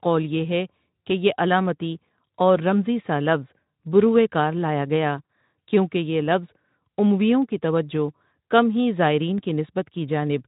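A speech clip in which about 40 ms of packets went missing in a VoIP stream at 5.25 to 5.29 s, between "بروئے کار لایا گیا" and "کیونکہ یہ لفظ امویوں", which fits two lost 20 ms frames. This is VoIP packet loss concealed by the speech codec: the Speex decoder, running at about 15 kbps, filled the gap by extending its last pitch and filter with falling gain. The result is a brief stretched, fading sound, and the speech stays weakened or distorted just after the packets resume.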